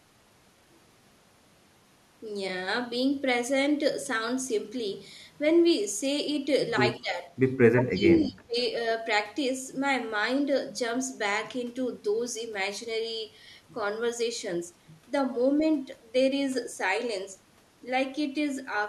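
From 6.98 to 7.31 s, then 7.71 to 8.56 s, the speech sinks by roughly 15 and then 20 dB. This is likely speech suppressed in double talk, with an echo canceller ducking overlapping audio.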